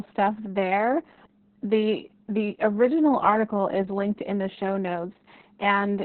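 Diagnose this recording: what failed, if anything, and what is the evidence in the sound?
The codec stage failed. Opus voice compression ran at a very low bitrate, which fits something around 6 kbps, so the encoder fell back to narrowband SILK linear-prediction coding. Throughout the speech, nothing is present above about 4.2 kHz, leaving it muffled and telephone-thin. The excitation signal is quantised so coarsely that the voicing turns hoarse and faintly robotic. The predictor keeps the broad vowel shapes, but the fine harmonic detail is lost, and the damage is heavy from start to finish.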